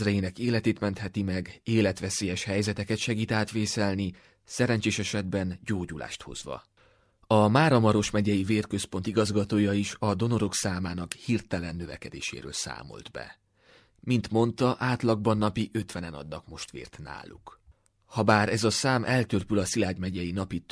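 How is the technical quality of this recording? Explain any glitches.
No glitches or technical faults can be heard anywhere.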